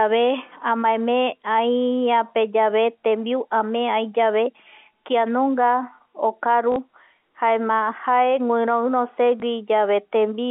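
At 6.72 s the speech briefly turns into a robotic stutter lasting about 40 ms, and a small blip follows from 9.40 to 9.42 s. Both are packet loss with the last packet repeated. Audio went missing, and the receiver replayed the previous chunk to fill the gap. The copies don't line up with the pitch, so the run buzzes. The lengths fit two lost 20 ms packets and then one, over the telephone-band G.711 line.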